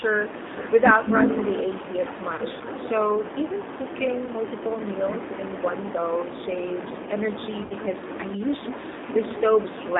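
Throughout the speech the sound carries the slightly rough, synthetic texture of the G.729 codec, which fits 8 kbit/s G.729A. The codec rebuilds each 10 ms frame from a vocal tract filter, a pitch predictor and a few pulses, so fine detail is lost, and the damage is plainly audible. On a spectrogram the energy sits in a band from about 250 Hz to 3.7 kHz, with a hard, empty ceiling above.

VoIP packet loss concealed by the speech codec interrupts the clip three times. From 2.35 to 2.40 s a gap of about 30 ms, which fits three lost frames, is filled by the decoder stretching its last pitch and filter into a buzzy tone or coloured noise that fades. A briefer patch from 4.26 to 4.29 s fits a single lost frame. The longest runs from 7.64 to 7.73 s and fits about six lost frames. There the voice smears into a decaying buzz or noise before recovering. On a spectrogram each patch shows frozen, repeated harmonic striations, and the waveform shows a smooth envelope tapering in amplitude.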